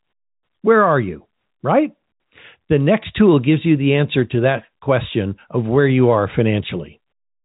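Nothing stood out on listening to this speech, which carries the narrow telephone band of G.711 telephone coding with no content above roughly 3.8 kHz.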